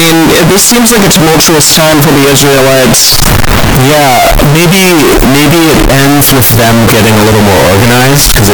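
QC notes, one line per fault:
Throughout, float read as integer: the speech was likely stored as 32-bit float samples but decoded as 32-bit integers, so each sample's sign and exponent bits, not its true amplitude, set the output level. The waveform collapses into a near-square shape sitting at an almost fixed, high level, regardless of how quiet the original was. The result is extremely loud and harsh, with background noise pushed up to the same level as the speech, though pitch can still be followed.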